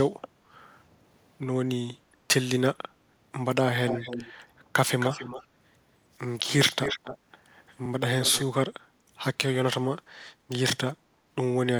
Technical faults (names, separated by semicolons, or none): echo leak; background gated by the echo canceller